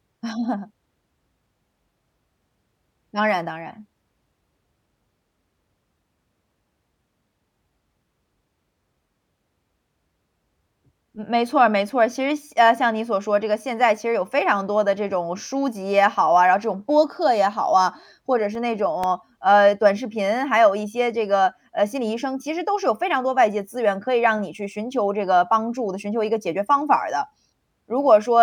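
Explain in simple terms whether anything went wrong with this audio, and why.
Something did go wrong, briefly: between 18.31 and 19.04 seconds in this speech clip there are four quick ticks, the longest only about a millisecond long. They're CD scratch ticks. A scratch or smudge on the disc wipes out more data than the player's error correction can repair, and it hits once per rotation, so you get a regular little click, here about four a second. The player patches over or mutes the damaged bit, which leaves a tiny tick or dropout.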